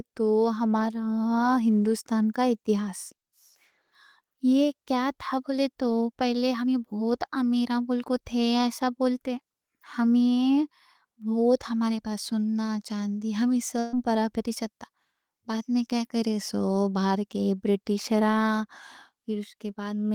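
At 13.79 to 13.95 s, right after "ہمارے پاس سونا چاندی", there's a burst of packet loss: the last sound is stretched and fades for about 130 ms, and roughly 140 ms of speech is skipped.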